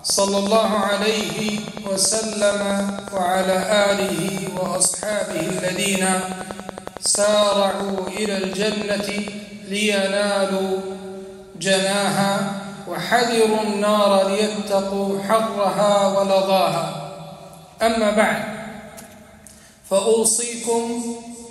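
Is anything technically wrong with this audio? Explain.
Yes. From 0.10 to 9.29 s there's a train of clicks, likely from interference or a faulty connection injecting about a hundred pulses at a regular 10.8 per second. They're heard as steady ticking, peaking about 10 dB above the sound.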